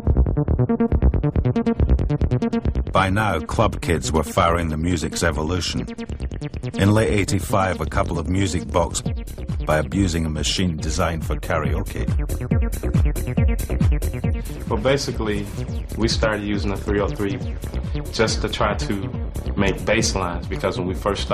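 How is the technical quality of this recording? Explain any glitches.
There is one glitch, a stream segment skipped, at 8.98 to 9.00 s. The sound jumps abruptly ahead with a brief blip, most likely because one chunk of a segmented stream failed to load and playback carried on with the next. A dropout would leave a silent gap and resume where it stopped. This is a forward jump with no silence, so content in between is lost.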